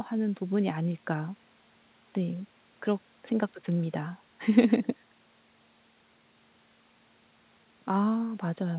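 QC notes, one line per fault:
No faults to note.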